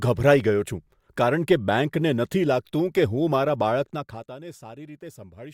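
Around 3.8 to 4.38 s there's zipper noise: the level drops roughly 15 dB in 1 dB steps, about fifty a second, each leaving a tiny click, so it zips.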